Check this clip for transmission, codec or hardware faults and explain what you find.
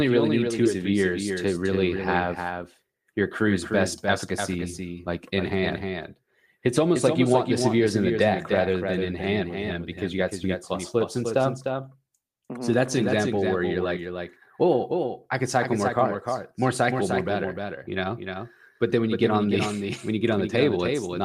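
Two faults are present in the speech: a second copy of the audio throughout, and one forward jump near the start.

A doubled audio track runs the whole length. A full-band copy trails the original by roughly 300 ms at about 5 dB lower, likely from the audio being captured twice through a slower second path. Unlike room echo, the copy has no decay tail or reverberant colouring.

A skip ahead occurs at 0.65 s. Around a third of a second of speech is lost, and playback jumps forward with no silence or fill, the two sides butted together. Unlike a dropout, nothing is muted, so it sounds like a clipped-out fragment.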